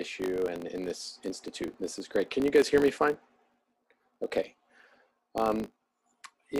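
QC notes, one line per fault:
Throughout: filter restarted on every block, a 50 Hz buzz of small transients that tracks the signal's level and vanishes in silence, unlike steady mains hum.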